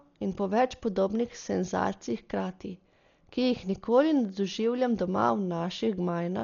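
From start to end, the speech is dull, with nothing above 6.9 kHz. A rough, fluttering noise clings to voiced tones. This is likely Dolby Digital compression, heavily starved, which fits about 40 kbps. Unfunded frequency lines are refilled with dither noise.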